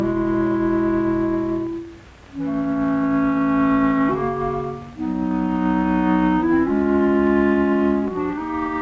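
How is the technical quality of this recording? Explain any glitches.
No glitches can be heard anywhere in the recording. It runs without dropouts, clicks or interruptions.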